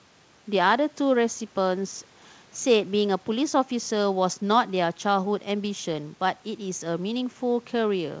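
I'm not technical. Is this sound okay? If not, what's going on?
Yes, nothing wrong here.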